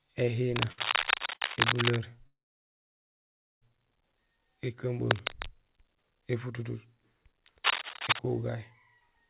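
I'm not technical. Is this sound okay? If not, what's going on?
No, there are a few problems here.

Cable scratch noise: from 0.56 to 2.0 s, 5.07 to 5.46 s and 7.64 to 8.19 s there's a scratchy, rustling layer over the speech, loudest in the last stretch. That's likely a worn cable, plug or control being moved, so the connection crackles as it shifts.

Short stalls from a late packet: at 0.72 s and 1.34 s the sound briefly hangs, for about 55 ms and then 64 ms. The call was waiting on a late chunk of audio, so it stretched the last bit of sound until the chunk showed up. Nothing gets lost, but you hear a tiny held moment.

Call audio freeze: from 2.27 to 3.64 s the audio stops for about 1.35 s, and almost all of that is plain silence. That's likely audio held up on the way. When it arrives, the speech picks up exactly where it left off, so nothing is missing. There's just a pause added.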